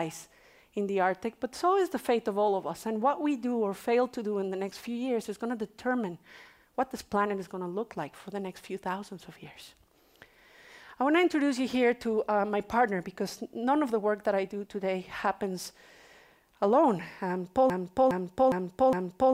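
A stalled player or stream likely kept resending its last fragment: from 17.7 s to the end, a broken-record loop repeats one 0.41 s piece four times, back to back.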